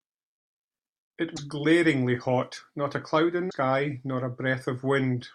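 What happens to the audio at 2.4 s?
Nothing goes wrong at 2.4 s; the speech there plays through intact, with no dropout, click, distortion or other fault.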